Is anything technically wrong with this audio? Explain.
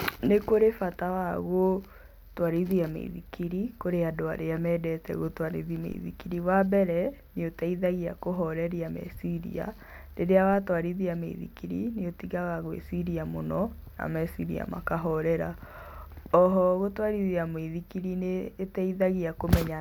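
Yes. A DC step occurs twice in this speech, at 5.92 s, just after "andũ arĩa mendete gũtwarithia", and again at 10.53 s. Each is a brief low thump: the waveform's zero line jumps by about −36 dBFS, then eases back as a roughly 5 Hz high-pass drains the offset.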